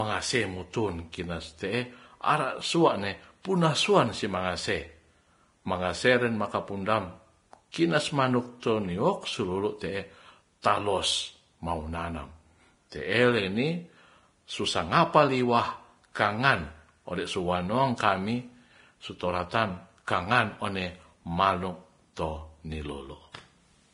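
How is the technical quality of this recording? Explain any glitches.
Technical quality is poor: the speech carries heavy compression damage throughout, plus two brief smearing glitches. Aggressive lossy coding, likely Vorbis compression at a low bitrate around 30 kbps, discards everything above 10.5 kHz and coarsely quantises the treble, leaving the speech hissy, grainy and dull. Pre-echo at 7.72 to 7.74 s and 10.62 to 10.64 s comes from block-spread quantisation noise leaking ahead of sharp attacks, giving a short hiss of about 25 ms and 22 ms before each one.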